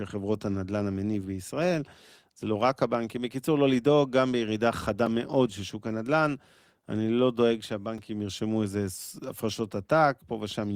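Blocks of digital silence at 5.06 s and 7.98 s: about 4 ms of speech drops abruptly to silence and back, each brief gap heard as a tick or dip.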